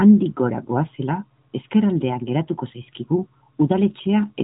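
Nothing stood out as a technical fault on listening to this speech, which comes through a narrowband mobile codec with its top end ending below about 3.8 kHz.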